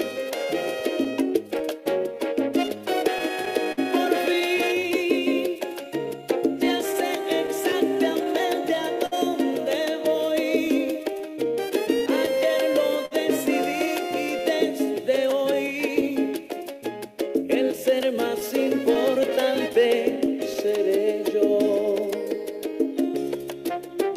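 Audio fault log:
Throughout: clock drift between sender and receiver. The sending device's clock runs roughly 4% slower than the receiver's, so the jitter buffer keeps draining faster than it refills. The receiver must keep padding the stream to avoid running dry. The result is a faint, persistent unevenness in timing rather than one clear glitch, and it drives the corrections and stalls listed below.
0.14 to 24.11 s: repeated timing corrections. To stay in step with the slow sender, the receiver keeps inserting small stretches of repeated or extended sound, all in the same direction and unevenly spaced, adding about half a second overall. Playback comes out at roughly 98% speed. It sounds slightly dragged, with an unsteady tempo and occasional tiny hiccups where an extension lands.
0.80 to 3.79 s, 6.66 to 7.74 s, 10.67 to 13.13 s, 18.40 to 20.57 s: scattered short gaps. Individual packets arrived late or not at all, and the receiver bridged each hole by continuing the last sound, so nothing is actually lost. 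The first and third stretches hold about seven patches each, the longest around 50 ms. The second has about three and the fourth about five, none beyond roughly 15 ms. They come through as brief ticks, smears or hiccups.
9.06 to 9.14 s: short stall from a late packet. One packet was not there on time, the buffer ran empty, and the receiver held the last sound for 56 ms until it arrived. Playback then resumed from the same point, now 56 ms later. No audio is missing, but one moment lingers audibly too long, with a slight buzzy or dipping quality during the hold.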